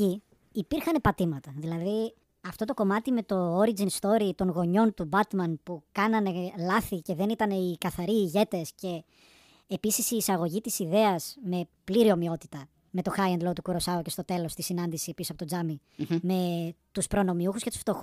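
Throughout, a wrong sample rate makes the speech 1.38 times faster and 5.55 semitones higher, consistent with 32 kHz audio played at 44.1 kHz; spectrogram harmonics sit shifted upward.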